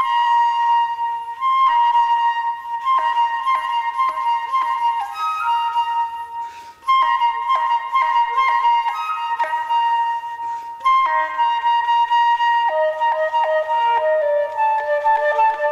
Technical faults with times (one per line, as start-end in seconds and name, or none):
1.57-3.27 scattered short gaps
3.21-4.41 jitter buffer slow-down
6.41-6.99 jitter buffer speed-up